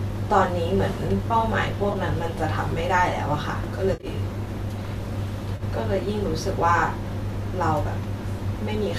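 At 1.93–1.96 s, 3.93–4.06 s and 5.56–5.63 s, AAC frame loss with concealment: lost blocks, which fit 10 ms frames, are refilled from the last good spectrum. Each patch sounds smeared and noisy. Unlike a plain dropout, nothing goes silent. Faint graininess throughout is likely light low-delay AAC compression.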